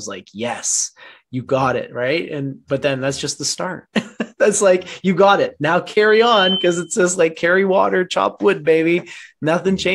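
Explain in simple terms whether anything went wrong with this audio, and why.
From 6.08 to 6.97 s, a loudspeaker feedback squeal rises over about a third of a second into a steady 3.1 kHz whistle, roughly as loud as the sound itself.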